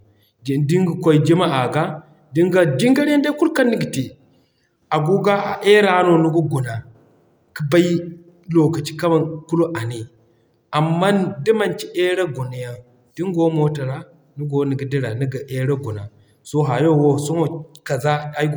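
No technical faults can be heard anywhere in the recording.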